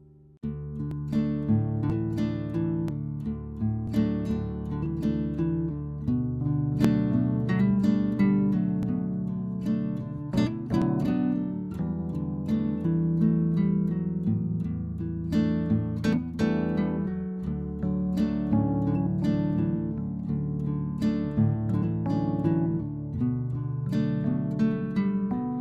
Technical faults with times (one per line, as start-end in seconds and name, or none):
0.91 overlap between stream segments
1.90 overlap between stream segments
2.88 overlap between stream segments
3.87 overlap between stream segments
4.86 overlap between stream segments
6.84 overlap between stream segments
8.83 overlap between stream segments
10.82 overlap between stream segments